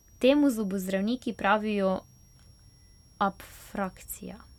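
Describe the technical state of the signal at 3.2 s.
At 3.2 s the speech carries a switching supply whistle, which runs throughout the clip rather than only at this moment. A switching power supply is cycling at a rate low enough to fall in the audible band, or two supplies are beating against each other, and the result couples into the audio path. It is heard as a thin high whistle wandering between about 5.5 and 5.7 kHz, sitting roughly 40 dB below the speech.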